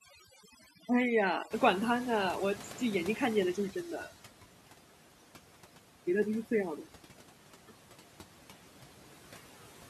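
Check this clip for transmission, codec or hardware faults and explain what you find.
Three processing faults are audible, all from noise suppression; none point to transmission, codec or hardware trouble.

Overdone noise removal runs through the whole clip. The reduction is set so aggressively that any frequency band sitting near the estimated noise level is pushed almost to nothing, and the quieter parts of the speech are removed along with it. The gaps between phrases fall to near silence scattered with small twinkling specks, and the speech is stripped of its softer detail.

Noise suppressor artifacts are also present throughout, with about 12 dB of noise cut. The suppressor works frame by frame, lowering each band it judges to be steady noise, so the residual background ducks in the pauses and swells back up underneath the speech.

Noise suppressor catching up occurs from 1.50 to 4.12 s. 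Around 1.5 s the room noise jumps by about 25 dB, ending up about 18 dB below the speech. The suppressor's noise estimate trails this jump, so the louder background first comes through with less reduction. Over roughly 2.6 s the estimate adapts and the noise settles lower, reaching about 11 dB of reduction by 4.12 s.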